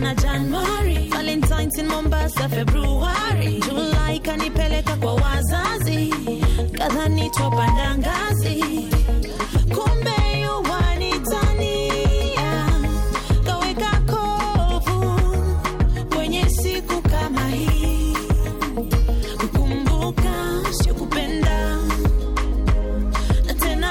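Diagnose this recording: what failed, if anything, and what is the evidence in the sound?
Loudspeaker feedback squeal in the acoustic and analogue loop between microphone and loudspeaker. From 7.08 to 8.00 s a steady 940 Hz tone swells over roughly half a second to a few dB above the programme. Loop gain at that frequency exceeded one, so the tone sustained itself.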